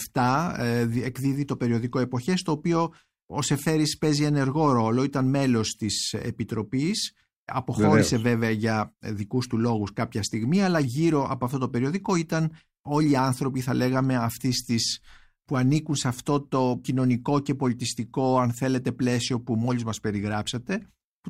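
No technical faults can be heard anywhere in this speech recording. Nothing in the sound calls for a timestamp or a closer look.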